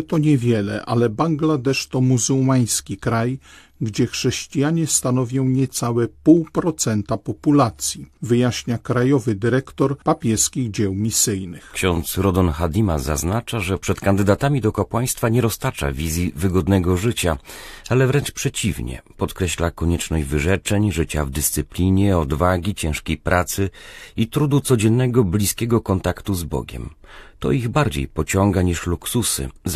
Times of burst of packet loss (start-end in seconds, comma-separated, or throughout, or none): none